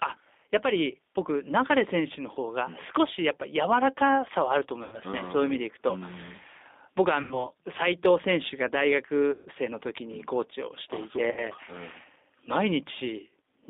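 The whole clip runs through a G.729 codec at 8 kbit/s, and the damage is plainly audible. The line only carries about 250 Hz to 3.7 kHz, so the speech sounds thin and boxy. The rough, slightly synthetic edge comes from the codec rebuilding each frame from a vocal tract filter, a pitch predictor and a handful of pulses rather than sending the actual waveform.

Then there are four patches of VoIP packet loss concealed by the speech codec. They fall at 4.83 to 4.99 s and 7.22 to 7.49 s, each covering about 90 ms of missing audio, at 9.31 to 9.48 s with about 150 ms gone, and at 11.31 to 11.50 s with about 60 ms gone. The lost spans point to three, three, five and two dropped 30 ms packets. In each gap the decoder keeps replaying its last pitch and filter at falling gain, so you hear a buzzy smear that fades out. Since each frame builds on the one before, the sound stays weak or distorted for a moment after real packets return, which is why every patch outlasts the loss itself.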